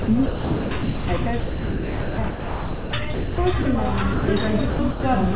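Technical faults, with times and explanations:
throughout: DC offset. The waveform sits shifted off zero by a constant amount for the whole clip. This cannot be heard as such, but it eats into headroom. It also shows as steady energy at the very bottom of the spectrum.
0.02 to 1.07 s, 1.40 to 3.65 s and 4.70 to 5.03 s: sound chopped by the voice detector. Within each stretch the sound keeps cutting in and out, with about 750 ms, 1.68 s and 210 ms swapped for comfort noise. A voice detector gating the sender is the likely cause.
4.13 to 4.28 s: sound dropped by the voice detector. For 150 ms the sound gives way to steady comfort noise, then returns. The sending side likely judged this stretch to be background and stopped transmitting, so the receiver filled the gap with noise. The call path's band limit shows throughout, with nothing above 4 kHz, as expected of G.711.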